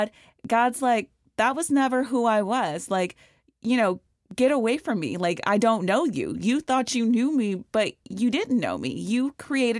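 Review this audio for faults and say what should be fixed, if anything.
Nothing in this speech recording needs fixing. No fault can be heard anywhere in it, so there is nothing to prevent.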